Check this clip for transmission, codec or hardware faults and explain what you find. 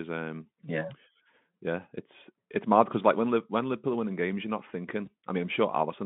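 One transmission fault is present, on a Speex link whose line band runs from 150 Hz to 3.5 kHz. VoIP packet loss concealed by the speech codec occurs at 5.05 to 5.08 s, just after "winning games you're not". The gap fits one lost 20 ms frame, and the decoder fills it by extending its last pitch and filter, leaving a brief, fading smear.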